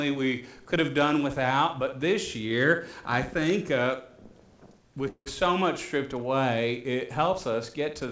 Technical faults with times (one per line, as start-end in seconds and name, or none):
5.08-5.28 call audio freeze